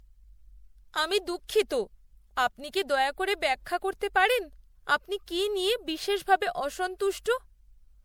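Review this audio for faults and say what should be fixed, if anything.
Throughout the speech there is a swirly, hollow smear with blurred consonant attacks, and nothing reaches above 20.8 kHz. The likely cause is generation loss: the audio seems to have passed through MP3 encoding about three times. Each pass requantised the sound on a shifted frame grid, so artefacts piled up. A single encode at the rate the sound points to, around 96 kbit/s, would not sound this swirly and hollow, so the cumulative swirl sets repeated encoding apart from one low-bitrate pass. To prevent it, keep a lossless master, edit in lossless form, and encode to MP3 only once, at the end.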